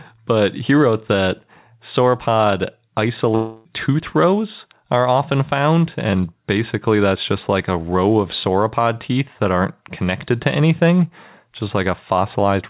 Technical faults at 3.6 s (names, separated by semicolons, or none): long network dropout